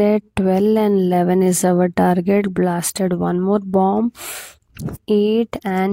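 At 4.95 to 4.97 s, damaged data in the compressed stream causes the decoder to misread the frames there, lose sync and hunt for the next valid frame header. The result is a brief blip of about 24 ms cutting through the sound.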